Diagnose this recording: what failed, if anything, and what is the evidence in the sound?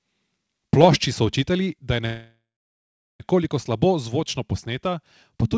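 A call audio freeze at the network and jitter-buffer stage runs from 2.06 to 3.22 s. The last sound is stretched into a fading fill that ends in about 0.73 s of silence. Packets were likely held up in transit, so the buffer ran dry. Playback then resumes where it stopped, adding about 1.14 s of delay with nothing lost.

At 4.20 s the call processing shows a microphone volume stepped down: the level drops by about 2 dB in a single step, with sound and background falling together. This is likely the call software lowering the device input gain. Throughout, the path has no content above 8 kHz, as expected from a G.722 call codec.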